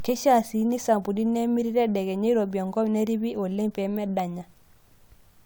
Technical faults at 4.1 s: none

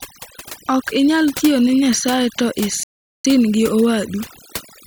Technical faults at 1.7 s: overdone noise removal

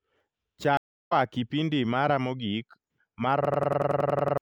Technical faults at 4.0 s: system hang loop

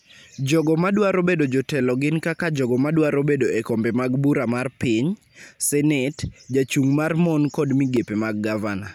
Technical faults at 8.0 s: block of digital silence

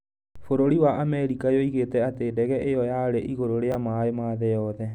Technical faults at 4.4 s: none

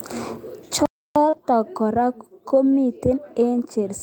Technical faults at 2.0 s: none

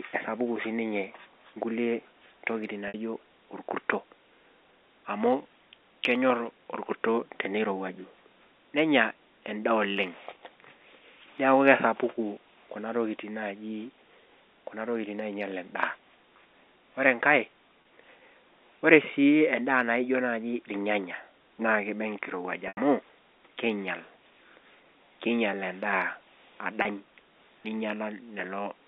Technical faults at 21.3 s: none

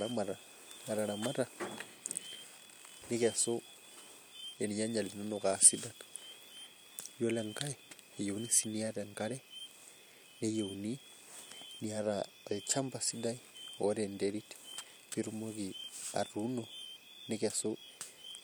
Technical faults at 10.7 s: none

